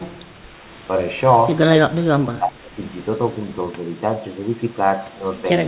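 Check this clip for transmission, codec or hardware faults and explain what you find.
The speech has one fault: a stretch from 1.87 to 2.79 s where the level falls away. This is likely speech suppressed in double talk. When both ends of the call are active at once, the echo canceller can't tell the near talker apart from loudspeaker echo, so it attenuates everything it hears. The result is a dip of roughly 25 dB, with the speech thinning and breaking up for about a second before recovering. The call path's narrowband sound, with nothing above 4 kHz, fits the G.711 mu-law telephone codec and is a normal feature of that codec.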